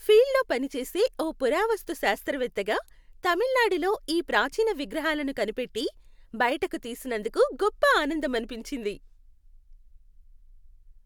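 No technical faults are audible anywhere in the recording.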